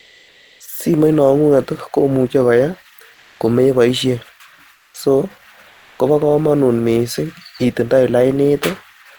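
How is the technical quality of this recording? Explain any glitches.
The recording has one recurring fault, comfort noise in place of the background, at 0.00 to 0.60 s, 3.14 to 3.40 s, 4.76 to 4.94 s and 5.68 to 5.99 s. In these pauses the real background, about 35 dB below the loudest speech, gives way to a steady, featureless hiss, likely from Opus discontinuous transmission, where the receiver synthesises noise while the sender goes quiet. The fill sits about 2 dB lower at the first two pauses, about 5 dB lower at 4.76 s, and level at 5.68 s.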